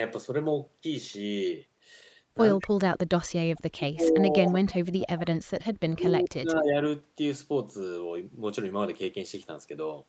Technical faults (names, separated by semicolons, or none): speech suppressed in double talk; echo leak